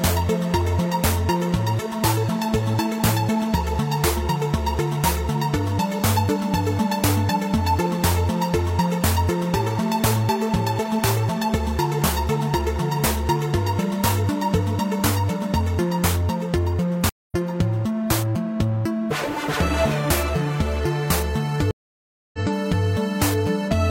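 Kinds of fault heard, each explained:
Stream reconnect: the connection dropped, playback went silent, and a new decoder picked the stream up again part-way through, so the sound resumes at a later point than where it stopped. The first break, 17.09 to 17.35 s, holds about 204 ms of silence and skips roughly 150 ms of material. The second, 21.71 to 22.39 s, is longer, about 624 ms of silence, and the audio jumps ahead by around half a second.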